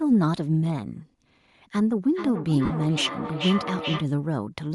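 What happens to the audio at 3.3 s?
At 3.3 s the sound is inside a feedback echo between two devices that runs from 2.13 to 4.15 s. Two devices in the same room are on one call, and the loudspeaker of one replays what the other's microphone captured. That microphone picks the playback up again, and neither echo canceller removes it because the sound did not come from its own device. Each syllable comes back at roughly 0.4 s intervals, thinner and more ringing each pass, with the loudest repeat about 7 dB below the direct speech.

Across the whole clip, including this point, the speech has a breathy, grainy edge. The upper spectrum sounds hollowed out and filled with hiss-like texture rather than real detail. This is likely Bluetooth LC3 compression. The transform codec of LE Audio works in short blocks, here consistent with 7.5 ms frames at around 48 kbps, and it discards much of the high band and substitutes noise. 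At 3.3 s that roughness also colours each returning echo.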